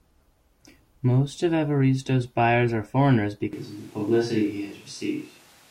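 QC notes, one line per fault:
3.53 s to end, switch to a distant microphone: right after "buyers are foreigners" the speech turns suddenly roomy and hollow, with thinner bass and background noise around 30 dB below the speech, while overall loudness barely changes. It stays this way until the clip ends. The likely cause is that the close microphone dropped out and the recording fell back to a far-off microphone, which picks up more room reflections and ambient noise.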